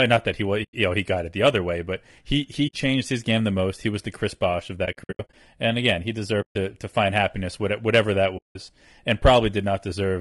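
Low-delay AAC compression colours the whole of this speech recording: the voice is plainly rough and grainy, with a hiss filling the gaps between harmonics and a thin, artificial-sounding top end. The likely cause is AAC-ELD coding at a rate that fits about 32 kbps, where the bits available for the roughly 500 frequency lines coded in each low-delay frame are spread too thinly. AAC frame loss with muting cuts five holes in the audio, at 0.63 to 0.74 s, 2.67 to 2.74 s, 4.85 to 5.34 s, 6.41 to 6.56 s and 8.37 to 8.56 s. In the 4.85 s stretch, about 280 ms of silence is broken into pieces scattered over roughly half a second, the longest gap lasting around 70 ms. Each hole is a short, smooth dropout rather than a sharp break, because the decoder zeroes the missing frames and the overlapping windows fade the sound out and back in.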